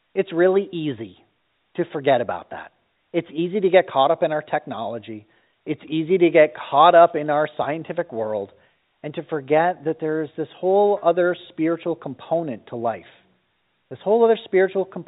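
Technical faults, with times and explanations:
No technical faults are present, so there are no times or explanations to give.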